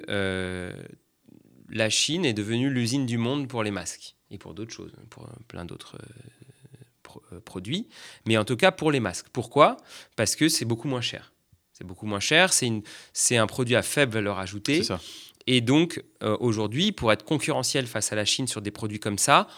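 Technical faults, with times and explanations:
0.74 to 18.95 s, clock drift buffer slips: A short click recurs every 0.7 s through this speech, about thirty times in all. Each one is a tiny jump where a block of around fifteen samples goes missing or is played twice. The steady spacing points to two devices on separate clocks, likely disagreeing by roughly 500 parts per million. The buffer between them drifts until it must slip, and each slip breaks the waveform's continuity, which is heard as the click.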